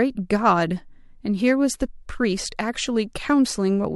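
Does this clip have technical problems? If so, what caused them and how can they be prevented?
No, no technical problems heard.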